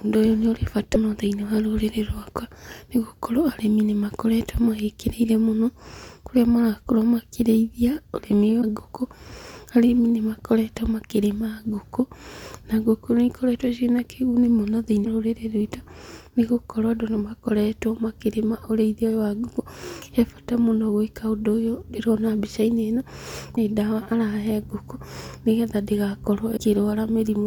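At 0.93–0.96, 8.61–8.64, 15.04–15.07, 23.55–23.58 and 26.56–26.59 s, the speech jumps ahead with a brief chirp, noise burst or short hole. This is likely a broken MP3 bit reservoir. Frames went missing, and the next frame decoded borrowed bytes from the wrong frame.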